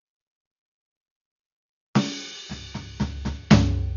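From the first second to the end, the music is dull and band-limited, with nothing above about 6.9 kHz, and sustained tones carry a rough, fluttering noise around them. This heavy damage is likely from Dolby Digital compression at a very low rate, which fits roughly 48 kbps. Starved of bits, the encoder cut the upper band and left many frequency lines without mantissa data, so the decoder filled those gaps with dither noise.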